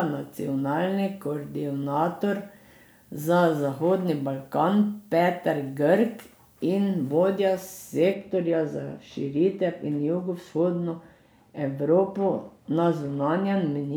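A speech clip with pre-emphasis left on from 0.0 to 8.14 s: the treble boost matching a 50 µs FM curve was never undone, lifting 10 kHz about 11 dB above 1 kHz. Unlike a broad presence boost, the lift keeps rising toward the top, so sibilance turns hissy and the sound becomes thin and bright.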